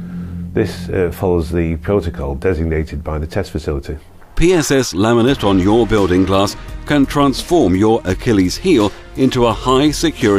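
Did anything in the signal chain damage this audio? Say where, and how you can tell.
No, nothing along the chain seems to have harmed this one; I listened all the way through and found no damage from any stage.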